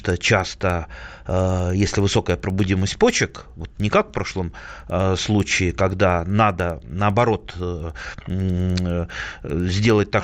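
Right from the start, the resampler was restarted on every 100 ms block going from 16 kHz to 48 kHz, so each edge ticks, a steady 10 Hz click under the speech.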